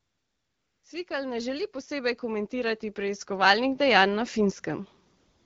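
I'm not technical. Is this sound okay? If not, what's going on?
No. Two things are going on.

From the start to about 0.83 s, and again from about 5.17 s to the end, you hear AMR comfort noise. The phone decided nobody was talking and stopped sending the real sound, so the receiving end filled the gaps with an artificial, even hiss. Unlike genuine room noise, it's unnaturally smooth and steady and switches on and off abruptly at the edges of the speech.

Between about 1.07 s and 4.65 s there's automatic gain rising: the phone judged the input too quiet and slowly turned its volume up, so everything swells over those few seconds. What tells it apart from someone simply speaking louder is that the background rises right along with the voice.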